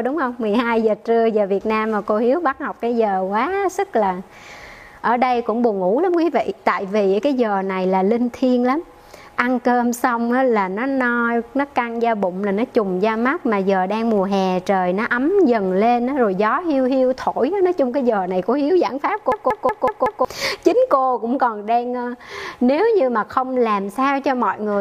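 A system hang loop runs from 19.32 to 20.25 s: the computer or its audio driver stalled while the sound hardware kept replaying the same ring buffer. A single 186 ms slice of audio repeats exactly five times at about 5.4 Hz, heard as a rhythmic machine-gun stutter rather than a steady buzz. That loop length fits an 8192-sample buffer. When playback resumes, roughly a second of the audio has been lost.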